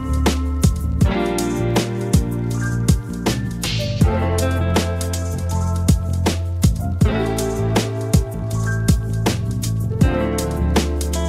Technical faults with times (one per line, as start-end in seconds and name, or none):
none